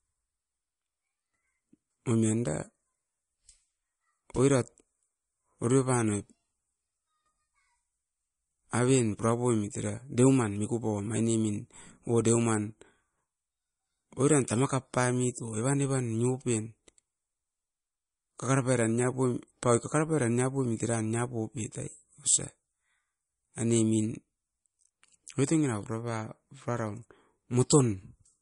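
From start to finish the speech has no content above about 10.6 kHz, and plainly audible swirling artefacts, most likely from MP3 compression at a low bitrate around 40 kbps: short of bits, the encoder cut the treble and dropped weak frequency lines frame by frame.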